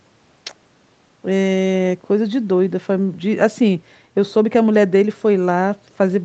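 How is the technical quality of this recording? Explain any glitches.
Nothing stood out on listening as a glitch in this speech recording, which has simply passed through a call's microphone processing with its top end reaching about 8 kHz and the lowest bass trimmed away.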